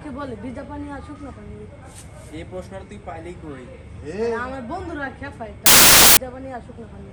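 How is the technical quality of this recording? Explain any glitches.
The recording has one clear glitch. From 5.66 to 6.17 s, roughly half a second, the audio turns into loud, harsh broadband noise, a case of samples built from the wrong bytes. The reader misassembled each sample's bytes, so the rapidly changing low bits became the dominant part of each value and the signal was replaced by broadband hiss.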